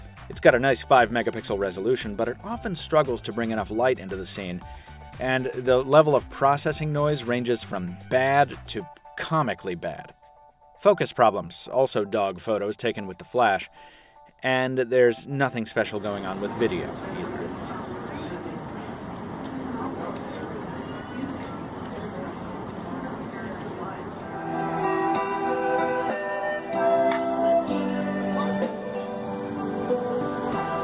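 No technical faults are audible.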